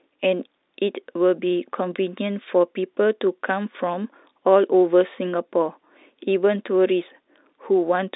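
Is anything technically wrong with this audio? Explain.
No, nothing stood out as technically wrong when listening to this speech.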